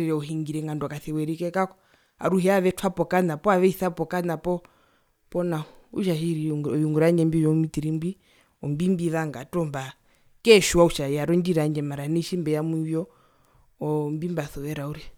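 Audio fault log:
No fault is found in this speech clip.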